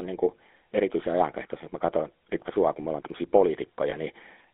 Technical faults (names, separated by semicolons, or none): GSM full-rate codec; lost GSM frames